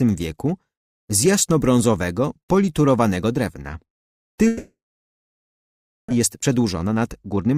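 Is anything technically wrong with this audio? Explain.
Yes. From 4.47 to 6.12 s, a long network dropout likely stopped packets arriving. The receiver briefly extends the last sound as a fading buzz, leaves about 1.3 s of silence, and resumes with roughly a second lost.

From 6.20 s to the end, a jitter buffer speed-up trims short pitch-period slices to shed the backlog. Playback runs at 110% speed with unchanged pitch, removing around 150 ms and sounding hurried.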